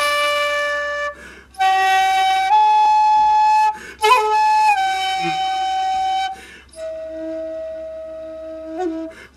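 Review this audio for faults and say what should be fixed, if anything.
At 2.85 to 2.87 s there is a skip ahead: about 0.4 s of audio is simply missing, and the sides of the jump are butted together with no fill. This happens when a backlog of late audio is discarded and the delay falls by about that amount. Prevent it by sizing the jitter buffer so bursts are absorbed rather than dropped.

From 2.96 to 5.16 s a jitter buffer speed-up follows. Playback runs at 109% with pitch unchanged, as short pitch-period slices are cut repeatedly to remove roughly a fifth of a second of excess buffering, so the passage sounds hurried. Prevent it by draining surplus buffer more gradually.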